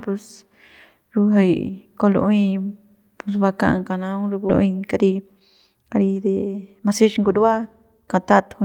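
A skip ahead at 4.49 s drops roughly a second of speech outright: audio that had piled up waiting was discarded, and playback leaps forward with no fill, so the two sides of the jump are spliced almost directly, cutting the flow abruptly.

Jitter buffer speed-up follows from 4.63 to 8.62 s, as the receiver trims short pitch-period slices again and again to shed about half a second of excess delay. Speech runs at roughly 112% speed with unchanged pitch, sounding noticeably hurried.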